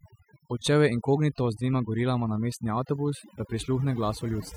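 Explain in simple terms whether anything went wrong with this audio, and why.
Overdone noise removal runs through the whole clip, start to finish. Someone cleaned up a noisy speech recording with a noise reducer turned up way too far. It kept shutting off narrow slices of the sound it mistook for noise, and the softer parts of the voice got thrown out too. So the gaps drop to an odd near-silence with little twinkly specks.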